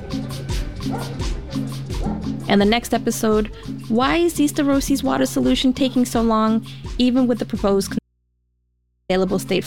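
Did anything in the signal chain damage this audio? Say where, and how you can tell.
Yes. There is an audio dropout to a faint residue from 7.99 s to 9.09 s: the signal vanishes abruptly for about 1.1 s and comes back just as suddenly, with only mains hum, roughly 50 dB below the signal, filling the gap. That hum points to an open analogue input, most likely a broken cable or connector contact upstream of a converter that kept running. A buffer or network dropout would leave digital silence, and a pause or fade would not cut off this sharply.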